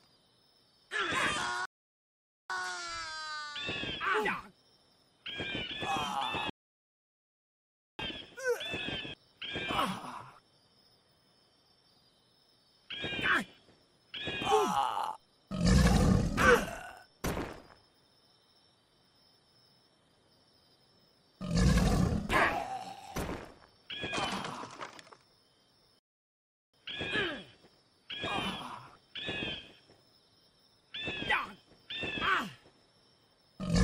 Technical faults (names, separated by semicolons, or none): rebuffering stall